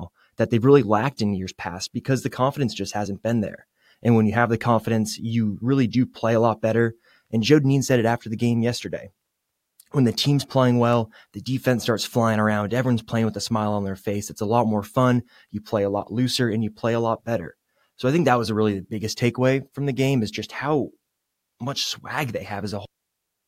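At 10.93 s a sharp, very brief snap cuts across the speech, peaking at about -25 dBFS. This is an electrical switching spike, most likely an arc from a nearby switch, motor or static discharge that the audio line picked up and added to the signal.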